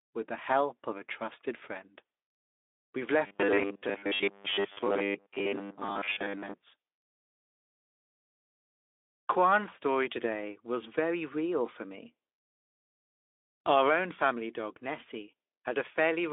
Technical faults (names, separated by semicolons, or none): robotic sound from repeated short buffers